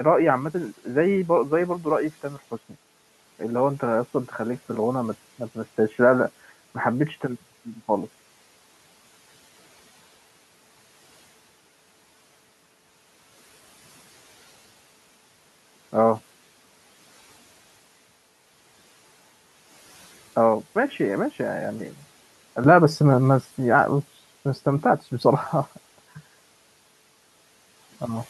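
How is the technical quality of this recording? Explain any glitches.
The recording has two glitches, both in the first 23 seconds, while the room noise about 27 dB below the speech is simply part of the space.

Input switched to a poorer device, from 0.0 to 22.64 s: the narrow, boxy sound likely comes from a lesser microphone or a headset's call profile. The level sits roughly 5 dB lower, and a faint extra noise rides well under the speech. At 22.64 s it opens up with no gap.

Speech cut by the noise suppressor, from 2.23 to 2.52 s: the suppressor mistook parts of the speech for background and pulled them down by as much as about 9 dB, around a tenth of a second in total, so those sounds come across swallowed and faint.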